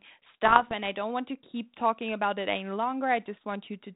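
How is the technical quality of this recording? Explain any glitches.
There's one real glitch, on a narrowband line that tops out around 4 kHz, which fits G.726 at 32 kbit/s. Bit errors on the ADPCM link, 0.45 to 0.74 s: flipped bits, at a rate of roughly 0.5%, knock the decoder's step size and prediction off, so you hear pops and rough, wobbly-level bursts.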